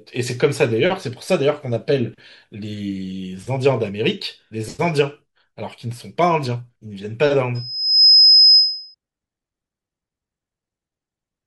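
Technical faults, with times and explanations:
7.55 to 8.95 s, loudspeaker feedback squeal: a pure tone at 5.1 kHz swells up over about half a second and ends up roughly 10 dB above the speech. The mic is hearing its own loudspeaker, and at that frequency the loop keeps amplifying itself.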